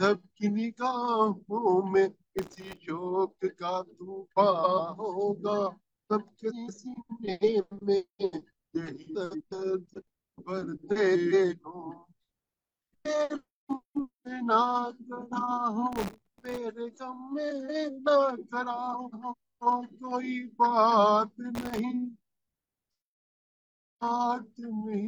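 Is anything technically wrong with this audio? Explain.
Yes, there are two separate faults.

Processor overload crackle occurs at 2.39–2.77 s, 15.92–16.58 s and 21.55–21.79 s. The system could not finish its tiny audio buffers on time, which fits buffers well under a millisecond long. In each burst it missed dozens of deadlines in a row, roughly a hundred in the middle one. Each missed buffer is filled with a scrap of stale audio, so the sound gets a gritty, tearing crackle that stops when the load eases. It differs from a simple dropout because nothing falls silent. The texture is a rough buzz of repeated fragments, not clean gaps.

Frames out of order occur at 4.50–4.79 s, 6.50–6.88 s, 9.14–9.53 s, 11.13–11.54 s, 17.50–17.90 s and 18.94–19.34 s. In each, two adjacent blocks of decoded audio play swapped. The blocks are about 139 ms in the first case and about 186 ms in the rest, which points to three or four codec frames each. 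The result is a brief garbled flutter. It differs from a skip or a repeat because no time is lost or added. The material is only rearranged.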